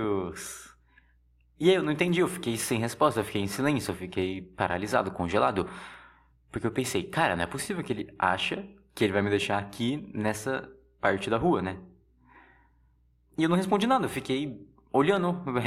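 From 0.82 s to 15.17 s, periodic USB or driver dropouts tick through the speech every 1.02 s, about fifteen times. Each skips a tiny sliver of audio, around a tenth of a millisecond. The strict metronomic spacing separates them from random clicks or crackle.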